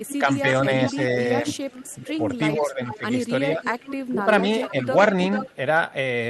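From 0.05 to 2.98 s, an echo leak plays a copy of the speech about 0.44 s late and about 10 dB down. The likely cause is a far-end loudspeaker the echo canceller did not fully cancel. From 0.2 to 1.46 s, speech suppressed in double talk dips the talker by up to about 5 dB, over roughly a third of a second in total. This is likely the canceller ducking both sides at once. From 2.03 to 4.89 s it happens again, deeper, with drops up to about 15 dB across about a second of dips. Within that, from 3.62 to 4.71 s, the echo returns fainter, about 15 dB down. A last echo scrap sounds from 5.32 to 5.56 s, again about 10 dB down.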